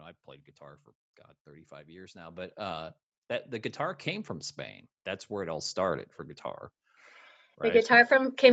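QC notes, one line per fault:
1.68–3.0 s and 5.29–6.13 s, automatic gain rising: the level swells steadily, by about 6 dB over the first span and about 4 dB over the shorter second one, with the background coming up together with the speech. An automatic gain control judged the input too quiet and raised its gain gradually, so everything in the signal climbs at once rather than the speech alone getting louder, heard against a call-path band that stops at 8 kHz.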